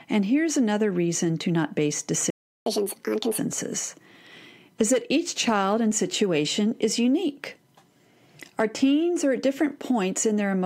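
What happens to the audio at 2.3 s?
At 2.30 s the speech cuts out into silence. This is a playback stall. It follows the words "reason to not base" and lasts until 2.66 s, about 360 ms. The likely cause is the player running short of data, or its thread being held up, so nothing reaches the output. The speech then picks up again. The break sounds like an abrupt dead gap in mid-flow.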